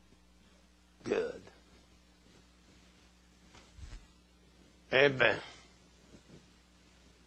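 No technical faults can be heard anywhere in this audio.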